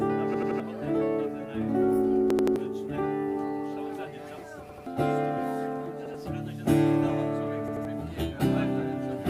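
Short stutters, a chunk of about 85 ms replayed with a hard join at each repeat, at 0.34–0.60, 2.30–2.56, 4.69–4.86, 6.06–6.14 and 7.68–7.85 s. This is a repeated buffer: new audio arrived late, so the last block, consistent with a 4096-sample buffer, played again. The first two repeat three extra times, losing roughly 300 ms each.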